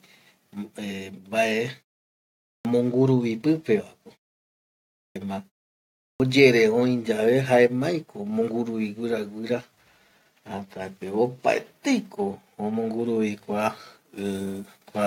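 At 1.65 s, the microphone volume is stepped up. The level rises by about 5 dB in a single jump. The call software has judged the input too quiet and raised the device's gain at once, not gradually. Everything the microphone picks up gets louder together. The speech and the room behind it both step up at the same instant, with no fade.

Then come three clipped starts after a pause. At 2.48 s, after a 0.73 s silence, about 170 ms of sound is lost. At 4.99 s, after a 0.9 s silence, about 166 ms is lost. At 6.05 s, after a 0.63 s silence, about 149 ms is lost. Each time, the playback device has gone idle in the gap and needs time to wake before it passes audio again. The opening of each phrase is swallowed, so the sound begins abruptly, already underway.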